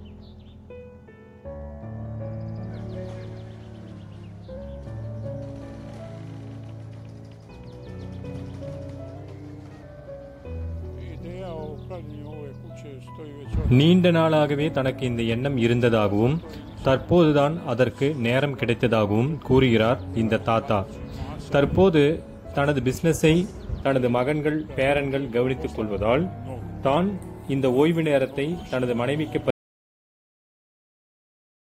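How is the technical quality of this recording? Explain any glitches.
The recording has clear technical faults in three places.

From 3.93 to 4.57 s, and again from 25.91 to 26.97 s, there is a drift correction step. The sound slows by about 6% and drops about 110 cents, a little over a semitone. Then it snaps back to normal. Speed and pitch move together. The likely cause is clock-matching software that changed the playback rate in one jump to correct its buffer level.

At 29.5 s the audio cuts out. It stays silent until the end. This is an audio dropout to silence. The gap is silent, with no room tone at all. The likely cause is that the input was lost while the recorder kept writing silence. Anything after that point is gone.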